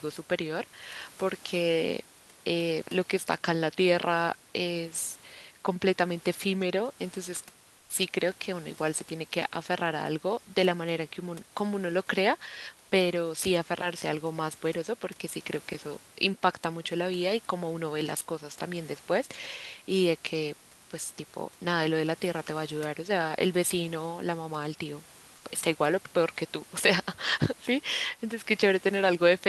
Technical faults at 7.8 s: comfort noise in place of the background

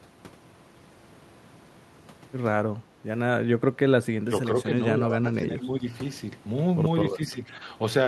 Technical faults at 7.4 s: speech suppressed in double talk

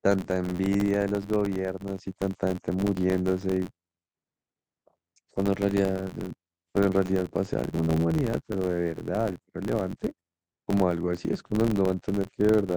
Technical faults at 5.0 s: filter restarted on every block

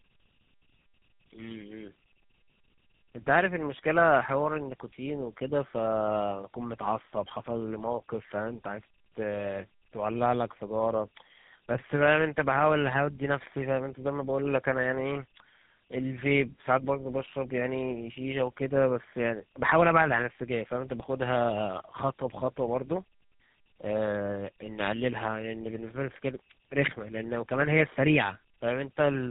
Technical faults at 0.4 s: tandem speech coding

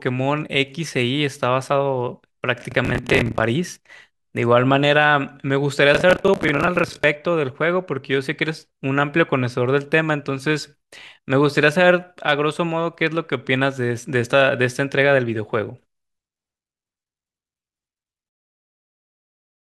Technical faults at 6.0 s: processor overload crackle

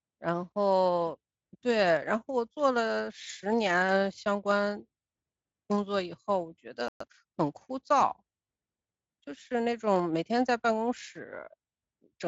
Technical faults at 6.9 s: playback stall

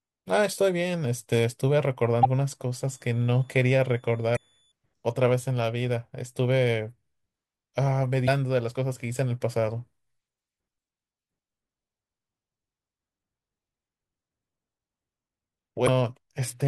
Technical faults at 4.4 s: switching supply whistle; damaged data in a compressed stream

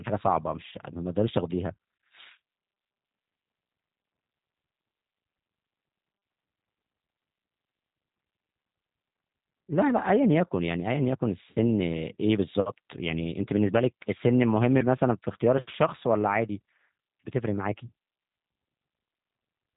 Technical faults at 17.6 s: G.729 codec

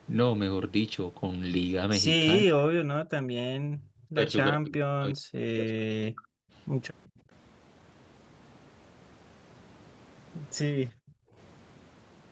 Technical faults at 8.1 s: none

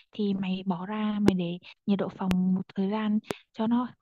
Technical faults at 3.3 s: loud pop

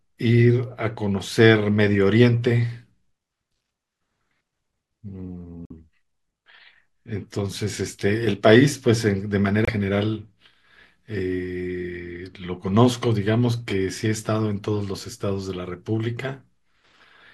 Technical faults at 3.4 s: none

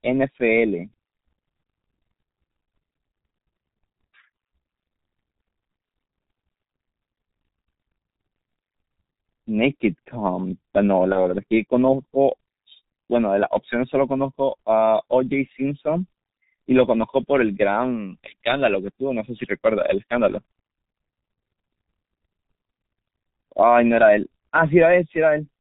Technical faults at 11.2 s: G.723.1 codec; VoIP packet loss concealed by the speech codec

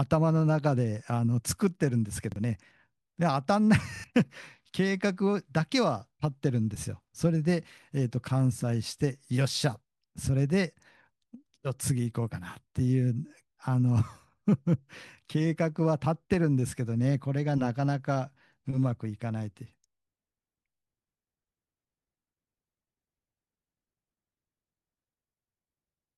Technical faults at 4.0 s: repeated buffer

